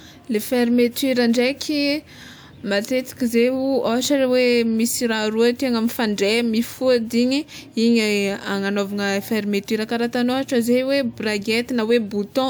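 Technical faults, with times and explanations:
There are no technical faults to report in this speech.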